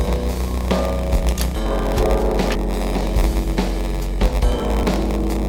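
From the very start there's a steady buzz at about 93.8 Hz running under everything. That's a padded block size mismatch. One stage hands over shorter blocks than the next one reads, and the shortfall in each block is filled with silence. The buzz rate fits a reader taking 512-sample blocks while the writer supplies about 480. Those little gaps also stretch the timeline: the audio plays at 0.938 of its proper speed while staying at roughly its normal pitch.

On top of that, there are two brief glitches, at 2.55 s and again at 4.83 s. Each is a quick chirp or blip, the signature of damaged data in a compressed stream. At those points some of the encoded bytes were wrong. The decoder couldn't make sense of the frames there, lost its place and had to hunt for the next valid frame header before it could carry on.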